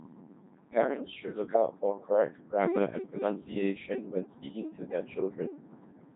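From start to finish, the speech passes through a Codec 2 vocoder. The waveform itself is not carried. Only pitch, voicing, energy and a rough spectral envelope survive, and sine waves rebuild the voice. Damage is heavy. The result sounds robotic and buzzy, which fits a 2.4 kbit/s mode.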